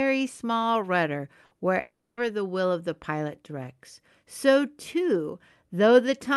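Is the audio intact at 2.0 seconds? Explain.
No. From 1.81 to 2.20 s there is a gap, likely a long network dropout: packets stopped arriving, so the receiver stretched the last sound into a fading buzz, then left about 0.26 s of silence. The audio resumes without the 0.36 s that was lost.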